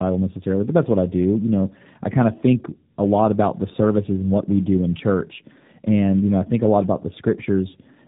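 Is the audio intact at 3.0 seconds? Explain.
No. At 3.0 s, as throughout the clip, there is tandem speech coding: the speech passed through two low-rate codecs in a row, consistent with G.729A and then AMR-NB, the later one re-coding the earlier one's losses. It sounds rough, muffled and warbly, with nothing above 3.7 kHz.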